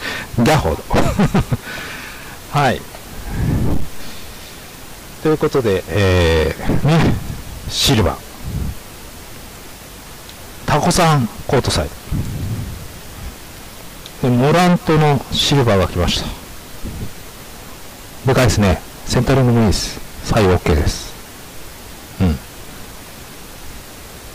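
Hard clipping runs the whole way through: the signal's pushed about 26 dB too hot, so roughly a tenth of it gets chopped flat, giving harsh fuzz on every loud sound.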